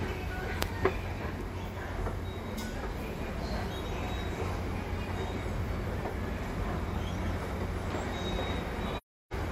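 A clip of sounds suffers AAC frame loss with muting: a short run of consecutive frames went missing, and the decoder zeroed their spectrum. From 8.97 to 9.33 s the sound fades smoothly into a silent gap of about 0.34 s and back out.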